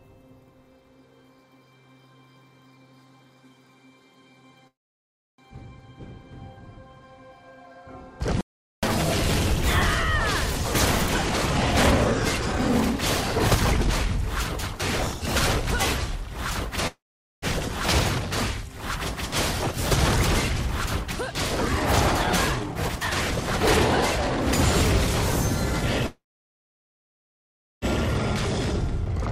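Three call audio freezes occur, at 4.67 to 5.41 s, 16.87 to 17.45 s and 26.07 to 27.85 s. Each stalls the sound briefly, then falls to silence for about 0.67 s, 0.46 s and 1.63 s respectively, before resuming exactly where it stopped with nothing lost, most likely because delayed packets starved the jitter buffer. From 8.41 to 8.83 s there is an audio dropout to silence, a hard cut to silence with no room tone, and about 0.42 s of material is gone, likely from a momentary loss of the input or link. Jitter buffer speed-up occurs twice: from 10.63 to 16.77 s playback runs at 111% with unchanged pitch, trimming roughly 0.7 s, and from 22.23 to 25.10 s it runs at 116%, trimming around half a second, so both passages sound hurried. Finally, at 29.05 to 29.09 s a skip ahead joins two points almost seamlessly, dropping roughly 0.7 s of audio.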